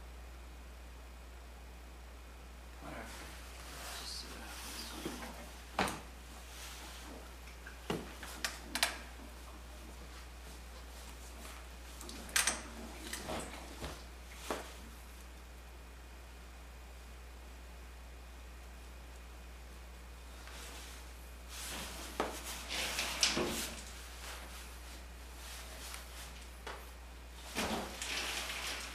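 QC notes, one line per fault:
Throughout: mains hum, a steady low tone at 60 Hz with a few low harmonics above it, sitting only a little below the wanted signal, roughly 5 dB down. Power-line current is reaching the signal path, from a ground loop or a nearby transformer.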